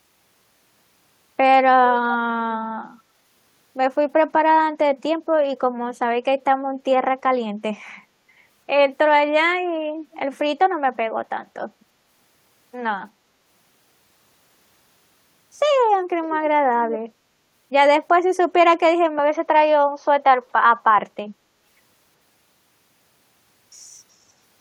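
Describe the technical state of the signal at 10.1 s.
At 10.12 to 10.19 s a brief, very faint trailing copy of the speech can be heard, arriving about 346 ms behind the original and sitting roughly 30 dB below it. This is an echo leak, likely caused by the far end playing the call on a loudspeaker while its echo canceller fails to fully remove the sound its microphone picks up, so a delayed fragment is sent back.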